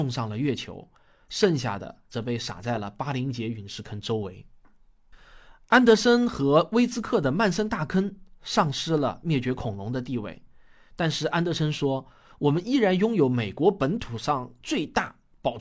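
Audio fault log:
Nothing stood out on listening to this speech recording.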